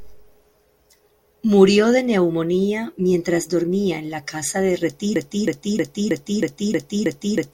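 At 5.16 s, right after "en la casa de", the speech locks into a broken-record loop: a 0.32 s fragment repeats exactly, back to back, eight times through to the end. The likely cause is a stalled player or stream resending its last buffered piece, so the following speech is lost.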